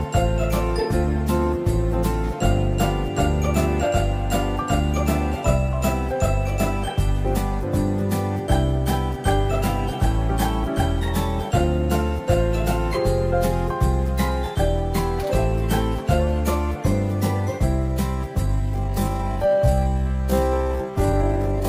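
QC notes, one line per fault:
18.44–21.69 s, time-stretched section: from 18.44 s to the end the sound abruptly slows to about 0.57 times its earlier pace while the pitch stays where it was, and the slowed stretch drags. This is likely software lengthening that portion to fill a set duration, holding pitch steady by repeating short overlapping pieces of the waveform.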